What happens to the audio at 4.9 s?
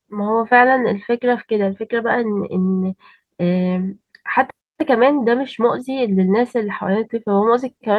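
Nothing goes wrong at 4.9 s; the speech there plays through intact, with no dropout, click, distortion or other fault.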